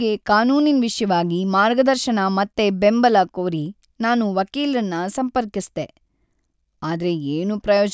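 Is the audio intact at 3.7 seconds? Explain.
Yes, the speech at 3.7 seconds is intact, with no audible fault at that moment.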